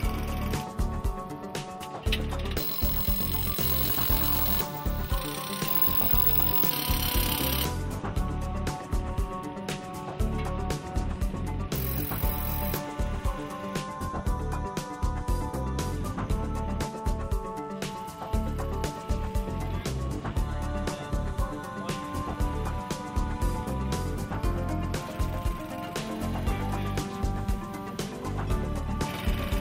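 At 17.22 s a mains buzz starts and lasts to the end. Switching spikes tied to the 50 Hz supply leak in twice per cycle. Their harmonics climb into the kilohertz range. The result is a steady, raspy buzz about 30 dB below the sound.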